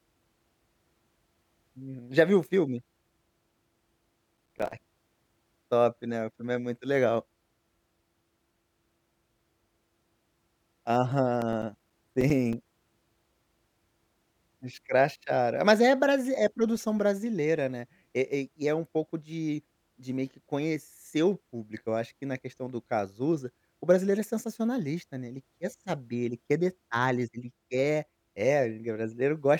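The processor fell behind its audio deadlines twice in this speech recording, causing processor overload crackle from 4.37 to 4.73 s and again from 11.41 to 12.53 s. Each time, a run of very short buffers, around 5 ms each, went unfilled and were left as silence. The abrupt dropouts chop the speech into a gritty, tearing crackle that sits on top of the voice and ends as soon as the load eases.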